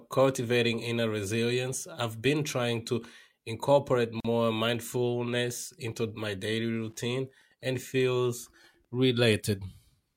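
At 4.20 to 4.25 s, between "been trying to incorporate" and "mindfulness into my daily", a 43 ms gap at a join of encoded pieces opens, where encoder delay and padding were left in. Unlike a dropout, nothing is lost: the speech resumes exactly where it stopped. From 6.66 to 8.96 s, Wi-Fi interference adds faint ticking, well below the speech. Unlike random clicks, the ticks repeat steadily every 102.4 ms, about ten times a second, from beacons rectified in the audio circuit.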